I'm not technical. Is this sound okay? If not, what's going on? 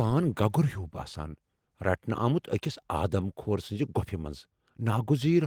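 Yes, nothing in this speech recording stood out as a problem when I listened to it.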